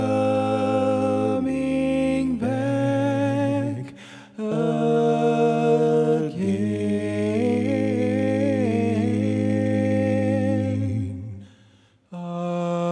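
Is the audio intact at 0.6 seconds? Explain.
Yes, at 0.6 seconds the audio is intact, with nothing audible there that breaks or disturbs the sound.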